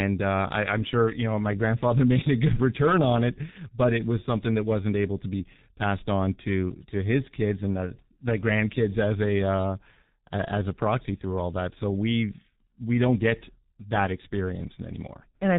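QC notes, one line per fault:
Throughout, G.723.1 codec: the speech has been squeezed through an old internet-telephony coder running at 6.3 kbit/s, and the damage is heavy. Nothing above 4 kHz gets through, so the whole thing sounds muffled and boxy. The codec rebuilds the voice from a coarse model refreshed only every 30 ms frame, which is why the tone comes out hoarse and the consonants smear into each other instead of landing crisply.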